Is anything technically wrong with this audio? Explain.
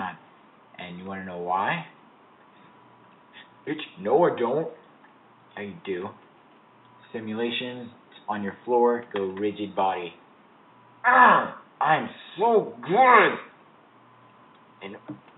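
No, nothing technically wrong stood out on listening to this audio.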